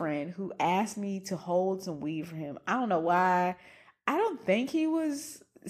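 No technical faults can be heard in this recording.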